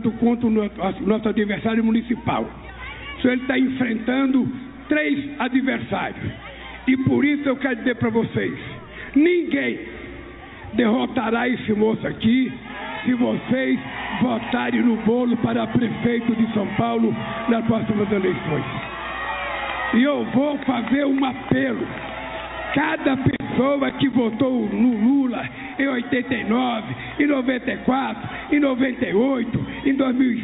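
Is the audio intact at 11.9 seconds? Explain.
Yes, the audio at 11.9 seconds is intact, passing through the call path with its usual telephone-band character and nothing above about 4 kHz.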